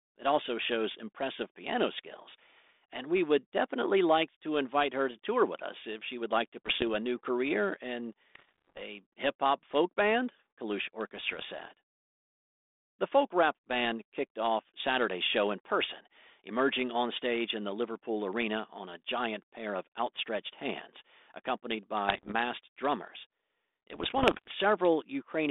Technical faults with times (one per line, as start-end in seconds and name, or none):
6.66-6.83 bit errors on an ADPCM link
8.35-8.82 bit errors on an ADPCM link
11.16-11.47 bit errors on an ADPCM link
22.08-22.34 bit errors on an ADPCM link
23.90-24.49 bit errors on an ADPCM link